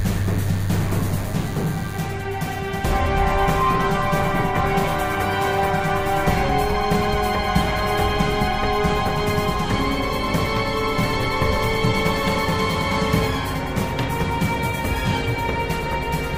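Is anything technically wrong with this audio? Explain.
Yes. From 0 to 2.0 s there is DECT cordless phone buzz, a thin, steady buzz with many harmonics sitting roughly 20 dB below the main sound. A nearby DECT handset or base transmits a short radio burst every 10 ms, and the audio circuitry rectifies those bursts into a 100 Hz pulse train. On a spectrogram it appears as evenly spaced horizontal lines at 100 Hz and its multiples, stopping at 2 s. On the waveform, a zoomed view shows small regular spikes every 10 ms.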